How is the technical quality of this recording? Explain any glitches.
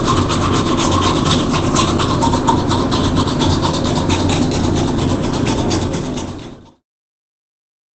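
Heavily compressed, honestly. Opus compression runs the whole way through: nothing above 8.7 kHz, and everything sounds muffled and hoarse. That's likely the codec dropping into its speech-oriented mode at a bitrate around 12 kbps, narrowing the bandwidth. The fade-out from about 5.5 s to 6.85 s is deliberate and smooth.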